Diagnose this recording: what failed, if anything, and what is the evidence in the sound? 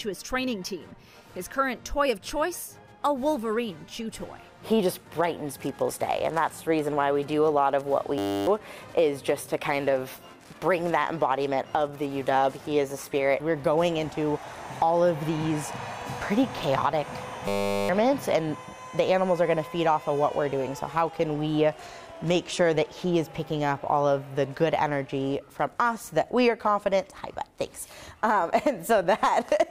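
The driver froze in a system hang loop, replaying one 10 ms buffer: a steady 100 Hz buzz at 8.18–8.47 s and 17.48–17.89 s.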